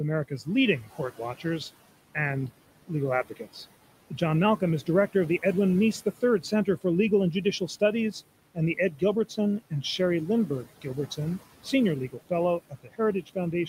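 Speech, with noise suppressor artifacts throughout. The suppressor pulls the room noise, about 18 dB below the voice, down by about 17 dB frame by frame, so the background sinks between words. Speech is cut by the noise suppressor at 0.28–1.45, 2.15–3.56, 4.1–5.43 and 6.05–6.85 s, then from 7.44 s to the end. Quiet sounds are taken for noise and drop by about 13 to 17 dB, so they sound swallowed.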